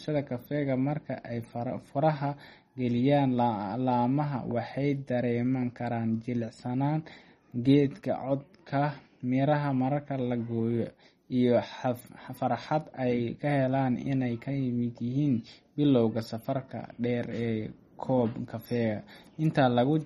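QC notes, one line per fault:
throughout: MP3 compression, likely the cause of the plainly audible coding damage across the speech. Nothing is present above 15.1 kHz, where the encoder has cut the treble outright, and the remaining band has a watery, swirling quality as weaker spectral lines drop in and out between frames. Consonant attacks are smeared. The degree of damage points to a low bitrate, around 32 kbps, that leaves too few bits for the fine detail.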